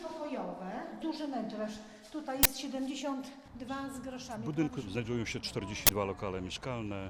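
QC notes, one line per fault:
2.43–2.45 s, uninitialised buffer: a sharp, loud burst of digital noise lasting about 21 ms, where garbage memory played back as audio. That fits one 1024-sample block.
5.87–5.89 s, uninitialised buffer: the same thing again, another 21 ms blast of junk from a block sent out before any real samples were written into it.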